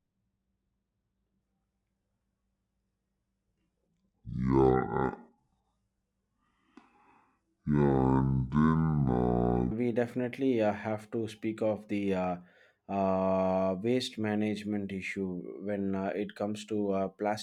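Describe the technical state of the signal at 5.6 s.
At 5.6 s the speech sounds deep and dragging, about ten semitones low: a section at the wrong speed, 0.00 to 9.71 s, likely played at 0.547 times its recorded rate.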